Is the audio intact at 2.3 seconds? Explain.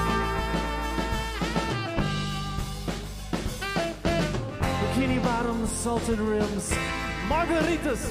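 Yes, the audio at 2.3 s plays through cleanly, with no dropout, click, distortion or other fault at that moment.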